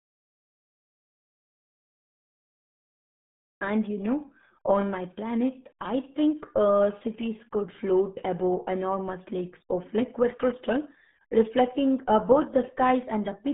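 Speech, squeezed through the RealAudio 14.4 codec for its whole length: heavily gargly, with nothing above 3.8 kHz, which fits an 8 kbit/s dial-up encode.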